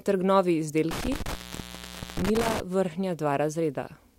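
Speech with an intermittent contact fault between 0.91 and 2.60 s, where the signal drops out for about 836 ms in total as a loose cable or plug momentarily opens. The sound cuts to faint hiss, with crackle marking each break and reconnection.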